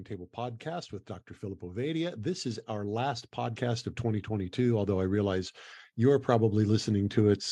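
From 1.59 s to 7.47 s, the level climbs steadily. This is automatic gain rising. The gain control judged the input too quiet and kept turning it up. It adds about 13 dB over nearly six seconds. The speech and the background noise swell together. The room noise grows as loud in proportion as the speech. That shared rise gives it away. A speaker moving closer would lift the speech but not the background.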